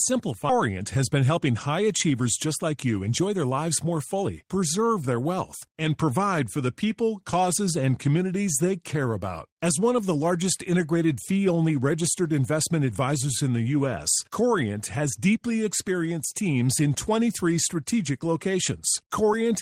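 In this speech clip, just after the start, the audio jumps forward abruptly between 0.49 and 0.51 s. Roughly a second of speech vanishes, and the two sides are butted together with no silence or fill in between. This is a skip ahead. A stretch of audio was discarded, either lost in transit or thrown out by an overflowing jitter buffer while later audio was already queued, so playback leapt to the newer material. From 0.61 s to 4.3 s, ending just before "preserve their wealth and", the speech runs noticeably hurried, about 7% fast, with its pitch unchanged. This is jitter buffer speed-up. After the jump, the receiver was still holding more audio than it wanted. It trimmed many tiny pitch-period-length slices in succession, shedding around a third of a second overall to bring the delay back down.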